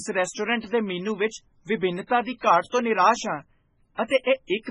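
Speech throughout carries heavy codec damage, likely from MP3 compression at a very low bitrate near 16 kbps: the spectrogram shows a hard ceiling at 10.4 kHz with patchy, flickering high bands. Pre-echo smears two attacks, at 2.07 to 2.10 s before "ਦੀ ਘਾਟ ਤੋਂ ਨਿਰਾਸ਼" and at 2.37 to 2.43 s before "ਘਾਟ ਤੋਂ ਨਿਰਾਸ਼ ਹਾਂ". The waveform shows noise spreading about 33 and 53 ms ahead of each onset.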